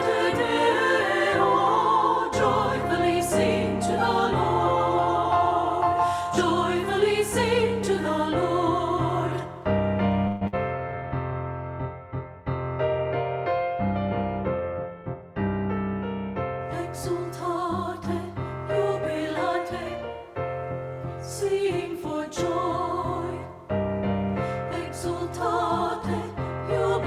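From 10.27 to 10.56 s the sound smears into a fading buzz before resuming about 120 ms further on, likely a long network dropout. On a spectrogram this shows as stretched, blurred harmonics.

From 10.78 to 11.33 s a jitter buffer slow-down repeats pitch periods, adding 65 ms to rebuild its reserve. Playback runs at 90% speed with the pitch unchanged, and the waveform shows repeated cycles.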